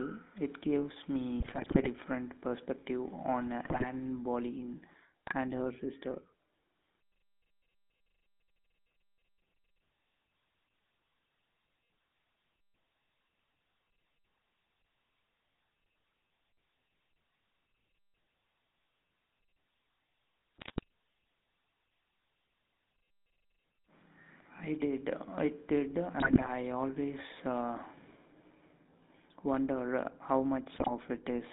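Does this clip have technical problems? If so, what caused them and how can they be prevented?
Yes. The speech runs through a GSM full-rate codec for its whole length, with the buzzy, gravelly roughness of that codec's regular-pulse excitation, which keeps only a sparse set of pulses and rebuilds the rest. Bandwidth sits between about 200 Hz and 3.7 kHz. Unlike plain narrowband filtering, the damage is a grainy texture inside the band, not just missing highs. It fits a 13 kbps channel. Prevention: carry the call over a wideband codec such as AMR-WB or a VoIP path.

GSM bit errors break in at 1.40 to 1.89 s (between "gives me" and "perspective on"), 3.64 to 3.85 s (right after "perspective on"), 5.27 to 5.33 s, 20.57 to 20.83 s, 26.18 to 26.51 s (just before "always uh"), and 30.74 to 30.92 s. Corrupted filter, pitch and gain values make the decoder produce squawks, pops and gargling. Dropped packets would bring silence or smooth concealment instead, so these sudden distorted bursts point to errors on the radio link. 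Prevention: make the call where signal strength is solid.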